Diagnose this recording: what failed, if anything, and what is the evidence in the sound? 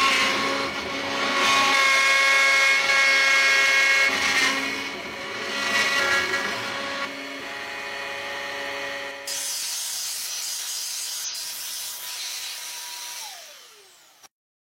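Damaged data in a compressed stream at 9.06–9.11 s and 11.24–11.30 s, codec stage: corrupted frames broke decoding briefly before the decoder resynchronised on a later frame header.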